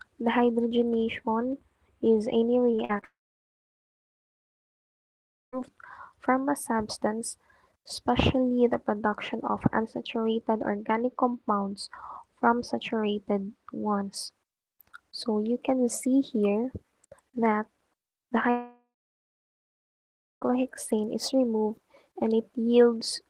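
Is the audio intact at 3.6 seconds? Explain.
No. A long network dropout runs from 3.04 to 5.54 s, likely from audio packets failing to arrive. The receiver stretches the last sound into a brief fading buzz, then holds silence for about 2.4 s before the audio resumes with that stretch missing.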